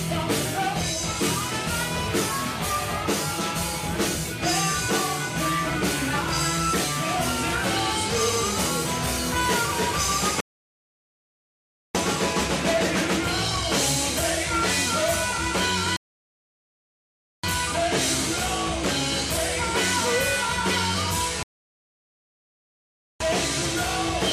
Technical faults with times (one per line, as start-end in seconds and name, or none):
10.40-11.95 rebuffering stall
15.96-17.43 rebuffering stall
21.43-23.20 rebuffering stall